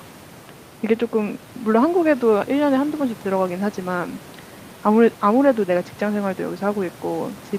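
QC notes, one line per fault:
No faults to log: the speech signal is intact and continuous, with the room's background noise sitting about 24 dB below it.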